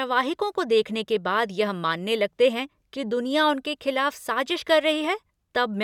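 A speech recording with one sharp click at 5.04 s. The click likely comes from dropped samples: a fraction of a millisecond is missing, so the waveform jumps abruptly.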